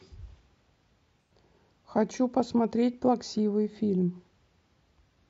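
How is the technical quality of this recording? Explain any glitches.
There's one glitch worth pointing out in this speech recording. From about 1.21 to 1.31 s there's a short AAC frame loss with concealment, roughly 85 ms long, which fits two lost frames. With no data for that stretch, the decoder patched the gap by reusing the last good spectrum, roughly reshaping its energy and randomising phase. Because the gap is brief, it doesn't fade to silence. You get a smeared, noisy or phasey blip before normal decoding resumes.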